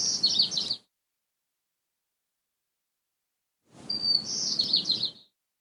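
A clip of sounds with an overlap between stream segments: timestamps of adjacent 2-second segments overlap, and the player trims away audio that was never duplicated. A few milliseconds vanish, so the waveform jumps, heard as brief clicks or skips at 0.65 s and 4.64 s.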